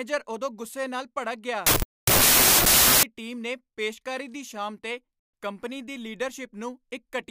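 From 1.67 to 3.03 s a wrong sample width fault appears. Packed 24-bit samples are read as 16-bit, so bytes pair up wrongly, and loud noise buries the speech. Unlike a byte-order swap, the speech also slows to 0.67 times speed and drops in pitch.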